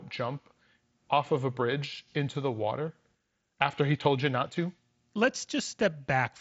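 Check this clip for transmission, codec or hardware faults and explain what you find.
No faults found: the speech comes over a Bluetooth mSBC headset link working as intended, with its band ending at 8 kHz and a light grain on the louder sounds.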